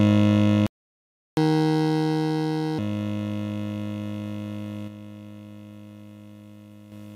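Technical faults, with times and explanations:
0.67–1.37 s, playback stall: the music just cuts out for about 0.71 s mid-flow, then picks up again. Most likely the player ran dry of buffered data or its playback thread got blocked, so there was nothing to send out until it recovered.
1.37–2.79 s, catch-up at higher speed: right after the gap everything runs at 1.5x, tempo and pitch rising together by roughly seven semitones, then settles back. The player is resampling its backlog faster to win back the time it lost.
4.88–6.92 s, sudden gain jump: the level drops by about 6 dB in one step, with the background noise falling right along with the music, then returns at the end. That's likely a digital gain change applied instantly rather than ramped in.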